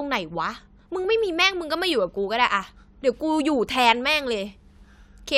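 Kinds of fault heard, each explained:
No technical faults heard.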